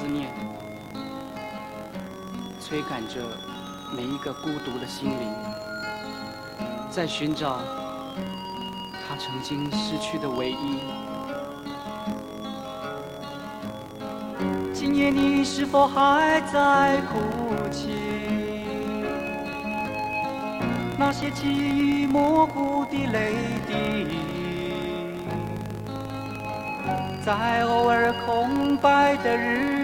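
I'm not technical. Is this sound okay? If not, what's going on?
No. The filter restarts on every block, throughout: it forgets itself each short chunk, so each restart clicks, making a 43.1 Hz buzz that rises and falls with loudness.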